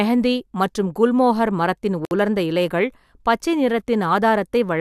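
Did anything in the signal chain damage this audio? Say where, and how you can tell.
Yes. There is a gap at a join of encoded pieces at 2.05 to 2.11 s, a silence of about 60 ms cut into continuous speech. The fault belongs to the codec stage. The audio was encoded in separate sections and joined without trimming, so the encoder's start-up delay and last-frame padding stayed in as dead air. The edges are smeared by the codec, and the speech picks up exactly where it broke off.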